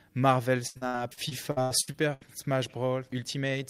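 From 0.67 to 2.23 s, repeated packet loss gives a robotic sound. About ten holes, the longest 81 ms, are each patched by stretching the preceding sound, so roughly a third of that span is filler. A spectrogram shows smeared, repeated frames between abrupt edges.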